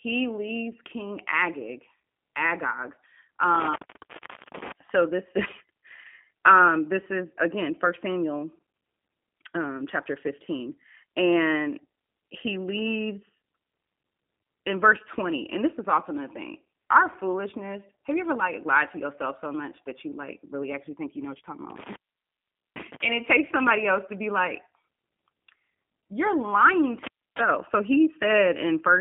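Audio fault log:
Throughout: G.729 codec. Speech rebuilt from a vocal tract filter plus sparse pulses at 8 kbit/s sounds rough and synthetic; the spectrogram stops sharply near 3.6 kHz, with the line band about 200 Hz to 3.5 kHz.
3.55–4.72 s, 21.70–23.02 s, 27.03–27.40 s: intermittent contact. A loose connection opens for about 0.78 s, 0.80 s and 0.29 s, so sound drops to faint hiss with crackle clicks at each edge, showing as flattened waveform gaps bounded by vertical spikes.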